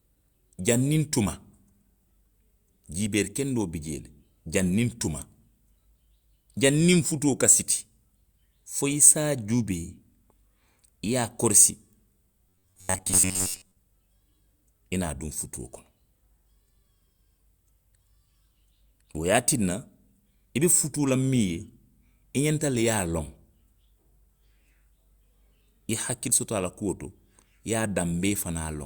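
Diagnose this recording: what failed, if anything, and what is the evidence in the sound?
Between 12.49 and 13.78 s the speech turns into a rigid, metallic buzz pinned at 93.8 Hz, still roughly tracking the syllables: robotic sound from repeated short buffers. The stage is most likely the driver or buffer layer starving for data. A fixed pitch of 93.8 Hz means a repeat period of about 10.7 ms, which fits a short buffer being replayed in place of fresh audio for most of that stretch.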